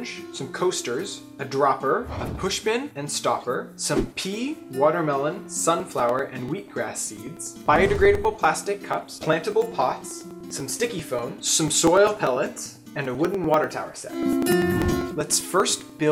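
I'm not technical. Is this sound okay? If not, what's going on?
No, from 5.8 s to 16.0 s there are periodic USB or driver dropouts: roughly ten ticks a second, each where a couple of milliseconds of sound gets skipped.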